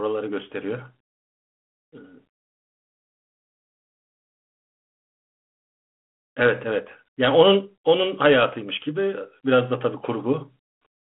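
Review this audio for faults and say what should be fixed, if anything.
Nothing stood out on listening to this speech, so there is nothing here that needs fixing.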